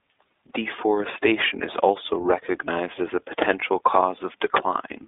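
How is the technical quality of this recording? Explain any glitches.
The recording is limited by a low-rate voice codec that runs through the whole clip: the iLBC codec, applied from start to finish.

The band is confined to roughly 300 Hz to 3.6 kHz, with nothing above 3.7 kHz. The speech sounds muffled and boxy, with a plainly audible rough, slightly synthetic texture.

The codec divides the signal into 20 ms frames and encodes each frame's excitation independently, which fits iLBC's 15.2 kbps mode. A plain telephone band-limit would sound dull but smooth. The grainy, buzzy edge here comes from that coarse, frame-by-frame modelling.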